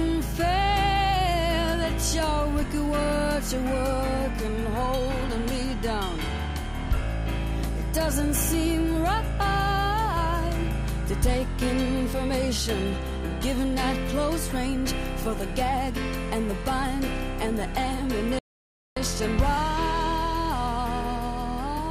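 At 18.39 s the sound cuts out abruptly and stays silent until 18.97 s, a gap of about 0.58 s. This is a playback stall. The player likely ran short of data or its thread was blocked, so output halted mid-flow before recovering.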